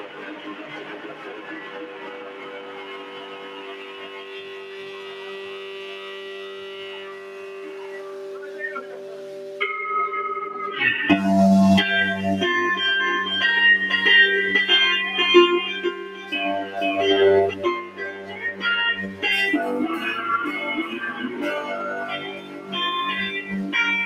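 A speech-tuned noise suppressor applied to music or sounds runs through the whole clip, riding the level up and down by around 15 dB. Sustained parts and decays sink while onsets survive, so the sound pumps and thins. Unlike a compressor, it reacts to how steady a sound is, not how loud.

Sound cut by the noise suppressor first hits from 0.0 to 8.61 s, then 8.77 to 9.6 s, with drops of about 6 dB. Held material fades and tails are clipped short while sharper attacks stay intact, which separates this from a simple level dip.

From 13.0 to 17.54 s a doubled audio track appears, likely from the same audio being captured a second time by a slower path. A full-band copy sits about half a second behind at roughly equal level. It has no decay or room colour, and it switches in and out abruptly, which distinguishes it from echo or reverb.

Within that stretch, sound cut by the noise suppressor recurs from 15.92 to 16.32 s. 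It returns from 17.83 to 18.37 s and from 22.38 to 22.71 s, again by about 6 dB. Each time, lingering sound is pulled down while transients stay clear.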